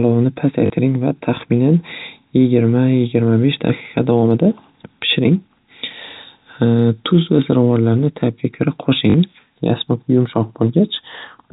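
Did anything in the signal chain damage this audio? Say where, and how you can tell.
Yes. Network packet loss with the last packet repeated filled 40 ms gaps at 0.66–0.70 s and 9.10–9.14 s with replayed audio. Each gap produces a brief, robotic stutter.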